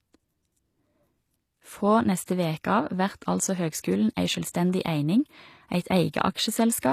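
From start to finish the speech carries plainly audible damage from what is likely HE-AAC compression, at a low bitrate that fits roughly 24 kbps. Only the lower spectrum is properly coded, and the treble is rebuilt by copying lower bands upward under a coarse envelope, so s sounds come out gritty, metallic or lisped. Unlike a plain low-pass codec, which leaves the top end dull, here the highs stay bright but sound synthetic and misaligned with the harmonics below.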